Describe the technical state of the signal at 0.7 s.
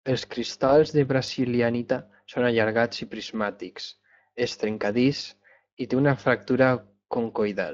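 At 0.7 s, VoIP packet loss concealed by the speech codec is in progress. It runs from 0.67 to 0.75 s, just before "de brasilianita són allargats". The gap fits one lost 20 ms frame. The decoder extends the previous pitch and filter while fading the gain. The result is a brief smeared, fading patch, and the voice is weakened as it recovers.

Speex codec damage is also present here, as it is throughout the clip. This CELP speech coding is plainly audible. It gives the voice a grainy, hoarse edge. The degree of damage suggests a bitrate of roughly 20 kbps.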